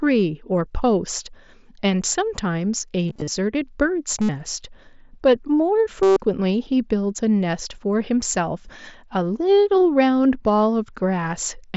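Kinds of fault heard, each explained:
Concealed Bluetooth headset packet loss: at 3.08 to 3.28 s, 4.21 to 4.29 s and 6.03 to 6.17 s, voice packets from the headset went missing, and the phone filled each gap by repeating the best-matching slice of the waveform just before it. At 3.08 s the dropouts are scattered and none lasts longer than 30 ms. The later solid runs of 75 ms and 135 ms become a held buzzy tone, with a slight warble as speech resumes.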